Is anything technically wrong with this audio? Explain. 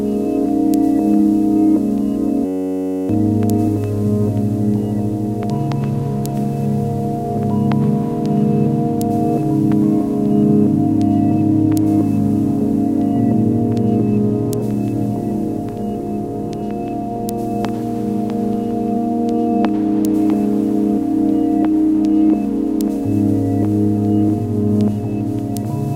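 Yes. From 2.45 to 3.09 s there is a system hang loop. A stalled system left the hardware replaying one 10.67 ms slice, which fits a 512-sample buffer, about 60 times. This produces a steady 93.8 Hz buzz that replaces about 0.7 s of sound. It shows as identical repeating waveform cycles and evenly spaced horizontal spectrogram lines.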